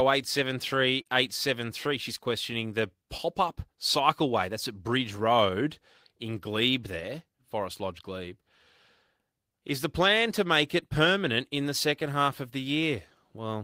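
A speech recording with three instances of short concealed packet loss, at 1.01 to 1.07 s, 3.17 to 3.20 s and 10.80 to 10.84 s. About 40 ms of audio went missing in the first and 20 ms in each of the others, and the receiver covered each hole by extending the preceding sound before blending back. Unlike a plain dropout, there is no silent gap, only a brief smear or wobble where the signal should have changed.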